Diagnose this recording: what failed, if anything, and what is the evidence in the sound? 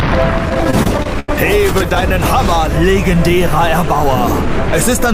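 Network stage, repeated stalls (stutter): from 0.49 to 2.03 s the sound keeps hitching, seventeen times, as late packets drain the jitter buffer. The receiver stretches the last sound to cover each wait, roughly 290 ms in total and up to 86 ms at once, so it drags without losing anything.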